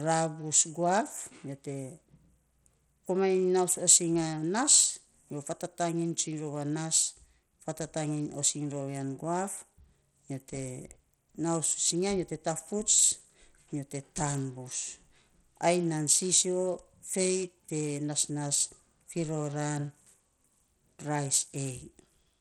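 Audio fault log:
Throughout: Bluetooth SBC compression, likely the cause of the speech's plainly audible damage. The treble thins out and flickers in and out, and a gritty, grainy noise with aliasing clings to the speech. SBC splits the sound into a few wide frequency bands and shares out bits by a simple rule, with no model of hearing. The damage is consistent with a low bitrate of around 80 kbps, which leaves the top bands starved of bits and quantises the rest coarsely.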